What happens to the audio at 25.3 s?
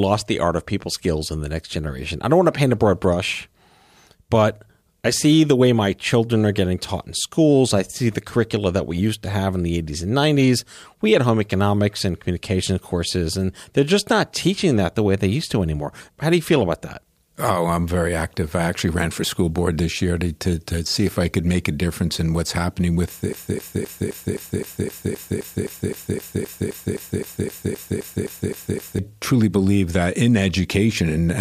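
A broken-record loop runs from 23.33 to 28.99 s, after "in what's happening with". A 0.26 s fragment repeats 22 times, likely from a stalled stream resending it.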